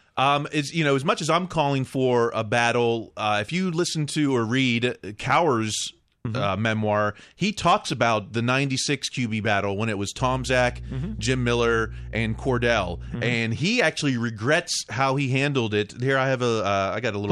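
Mains hum runs from 10.16 to 13.19 s in this speech clip, a steady 60 Hz tone with low harmonics sitting roughly 10 dB below the speech. A ground loop or nearby transformer is coupling the power line into the signal path for those three seconds.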